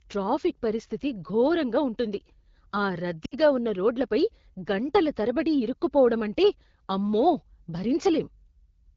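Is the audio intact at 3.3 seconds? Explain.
No. Radio errors caused a short run of AMR-WB speech frames to fail their checksum, so from 3.25 to 3.35 s the decoder filled the gap by repeating the last good pitch and vocal tract settings at falling gain. The speech smears and drains away for about 60 ms, consistent with three lost 20 ms frames, then returns briefly weak and rough on "ఉన్నరోడ్లపై గంటల తరబడి ఇరుక్కుపోవడం".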